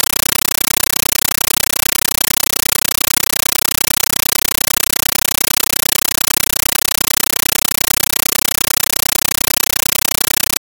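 Throughout the clip, a Dolby Digital (AC-3) bitstream reaches the output as raw samples and is never decoded: a compressed stream played as audio. Each frame comes out as a 9.33 ms burst of harsh noise and then silent padding, 31.25 times a second. The result is very loud, chattering static in place of the sound.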